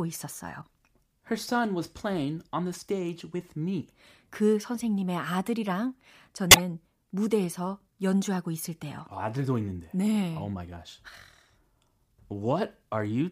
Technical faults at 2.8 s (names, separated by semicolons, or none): none